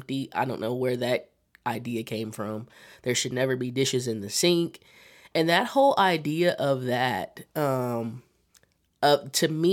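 No dropouts, distortion, glitches or other technical defects turn up anywhere in the signal.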